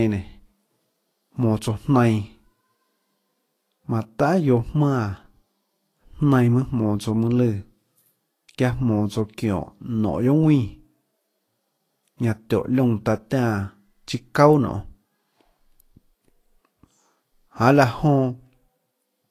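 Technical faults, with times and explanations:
Throughout, low-bitrate audio saved at a high bitrate: the speech carries the smeared, watery coding artefacts of a heavily squeezed encode, yet sits in a file whose size suggests far more detail than is present. The likely cause is a low-rate Vorbis stream, around 32 kbit/s, re-encoded as MP3 at about 192 kbit/s. The generous second pass faithfully preserves the damage from the first, because it has no way to restore what was already discarded.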